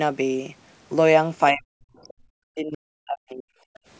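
Speech suppressed in double talk runs from 1.52 to 3.55 s, about two seconds in all. The talker's level collapses, dipping by around 40 dB at its deepest, and the voice thins and breaks up in pieces. The likely cause is an echo canceller facing simultaneous talk from the far end: unable to tell the local voice apart from loudspeaker echo, it pulled both down together instead of removing only the echo.

Background gated by the echo canceller follows at 3.83 to 3.87 s, a brief 40 ms hole where the room sound drops by about 17 dB. Here the canceller clamped the microphone hard while the loudspeaker was playing, treating the ambience as possible echo, then released it, so the background flickers out and snaps straight back. The call's microphone chain, with nothing above 8 kHz, is not itself at fault.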